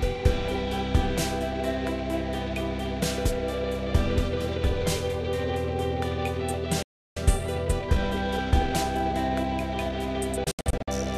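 A recording of everyday sounds. At 6.83 s a playback stall, likely the player running short of data or its thread being blocked, silences the audio for about 340 ms before it resumes at 7.17 s. The player then does a time-compressed catch-up from 7.17 to 10.17 s, trimming and cross-fading small slices so the sounds run about 1.1 times fast at normal pitch. From 10.44 to 10.88 s a digital broadcast dropout occurs: failed or missing frames mute the output in several quick 3 ms fades. About 240 ms of audio is lost in short holes spread across roughly 430 ms, the longest gap lasting 72 ms, which points to around ten lost frames.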